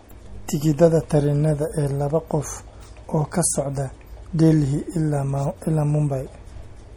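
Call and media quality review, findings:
MP3 compression throughout, likely the encoder starved of bits, consistent with roughly 48 kbps. Weak spectral lines drop in and out frame to frame: plainly audible watery swirl on speech, smeared onsets, sibilants metallic. Treble cut near 19.4 kHz.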